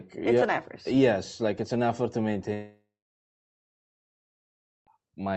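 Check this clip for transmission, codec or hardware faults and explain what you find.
One transmission fault stands out: a long gap in the middle of the speech.

Long network dropout, 2.53 to 4.89 s, right after "it's an effort to". Incoming audio likely stopped arriving, so the receiver briefly extended the last sound as a fading buzz, then left about 2 s of silence. Speech resumes with roughly 2.3 s lost, heard through the call codec's 8 kHz band limit.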